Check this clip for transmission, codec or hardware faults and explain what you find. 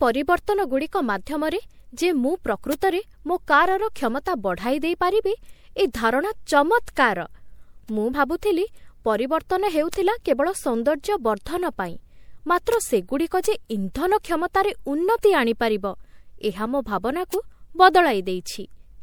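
The speech has two faults: a hollow, smeared character throughout, and five isolated digital ticks.

Generation loss runs through the whole clip. The speech sounds swirly and hollow, consonant onsets are blurred, and nothing is present above 21 kHz. The likely cause is repeated lossy MP3 coding, with the audio decoded and re-encoded a few times at settings that point to around 96 kbit/s. Each pass requantises the signal on a shifted frame grid, so noise and spectral gaps accumulate. A single encode at that rate would sound cleaner. The extra smearing is what separates this from plain low-bitrate coding.

Bit error spikes occur at 2.73, 9.94, 12.74, 13.45 and 17.34 s. Each is a single sharp, broadband tick. At each point one bit in one sample, or in two or three adjacent samples, flipped, so the waveform jumped by a power of two and snapped straight back. These ticks are unrelated to the speech and leave no gap or repeat. 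That distinguishes them from dropout clicks, which interrupt the sound, and from the softer, duller crackle of vinyl.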